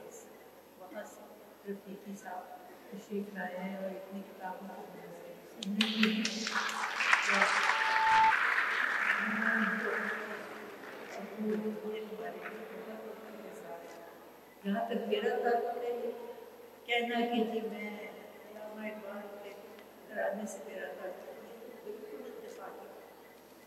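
At 7.24 s a loudspeaker feedback squeal begins. The microphone is hearing its own loudspeaker, and at 880 Hz the loop gain has passed unity, so that single tone feeds on itself. It swells over roughly a second to sit around 10 dB above the surrounding sound before stopping at 8.35 s. On a spectrogram it is a thin horizontal line at 880 Hz that brightens steadily. On the waveform the envelope flares into a dense, even band.

At 9.29 s and again at 13.34 s the audio stutters from repeated frames. Each time, a block of about 52 ms, which fits a pair of compressed frames, is decoded and played twice more, adding about 105 ms. The result is a quick jerky repeat. A spectrogram shows the same short pattern tiled side by side. The waveform shows identical segments placed back to back.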